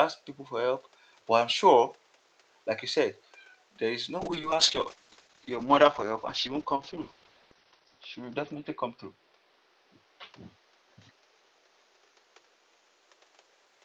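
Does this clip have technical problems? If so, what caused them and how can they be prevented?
Yes. A call bitrate drop runs from 4.18 s to 13.71 s. The speech turns coarse and muffled as the top end falls from 20 kHz to 6 kHz, which fits the encoder being throttled from about 48 to 8 kbps after the link's bandwidth estimate fell. It is worst for about 3.28 s. To prevent it, secure more stable network capacity for the call and set a higher minimum encoder bitrate.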